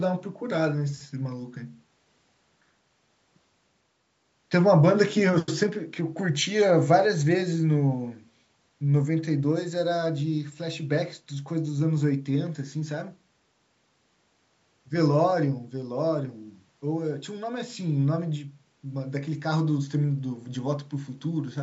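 There are no technical faults to describe in this speech recording.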